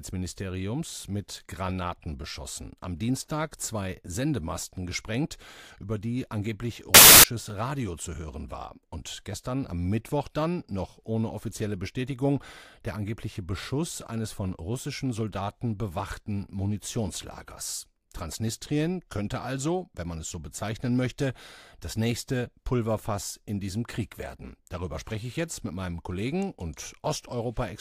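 A speech clip in which, from 6.94 to 7.24 s, just after "gesprengt über die angeblich", samples built from the wrong bytes promote noisy low-order bits, producing a burst of loud, harsh broadband noise.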